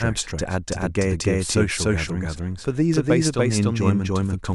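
From start to finish the speech is shadowed by a second, identical copy of itself trailing roughly a third of a second behind at about the same loudness, so every syllable is heard twice and the two streams smear into a confusing, stuttering overlap. The repeat is full-band and dry, with no decay or room character. This is a doubled audio track, most likely the same signal reaching the mix twice through a slower second path.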